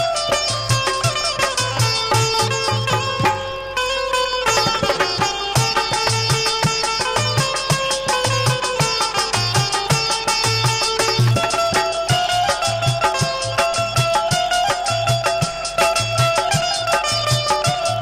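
A block size mismatch (padded) runs from start to finish. One stage hands over blocks slightly shorter than the next stage expects, and the missing remainder of each block is filled with silence. The buzz repeats at 46.9 Hz, which fits a 1024-sample read block. Because the shortfall is small, the audio is slowed only to 0.999 of its proper speed, so timing and timbre are barely changed.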